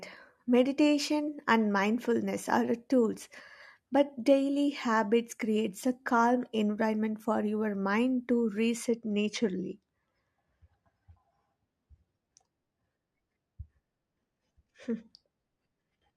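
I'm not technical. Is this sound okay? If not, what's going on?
No. Channel delay (comb filtering) sets in from 8.88 s to the end: one side arrives a hair late, so mixing cancels some treble, around 10 kHz, dulling the speech.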